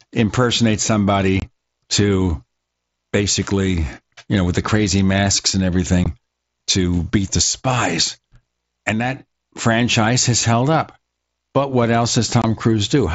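Three short holes stand out: 1.40 to 1.42 s, a brief one at 6.04 s, and 12.42 to 12.44 s. That's unconcealed Bluetooth headset packet loss, with roughly 22 ms, 15 ms and 22 ms of speech simply missing over the mSBC link, so each gap drops out abruptly with hard edges.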